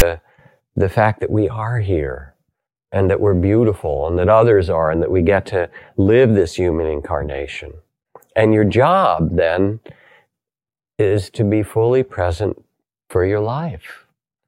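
A brief, loud rasp with hard edges and a lopsided, one-sided offset opens the speech at 0.0 s. This is file tags played as audio: a block of text metadata at the start was read out as though it were sample data, producing that harsh static burst.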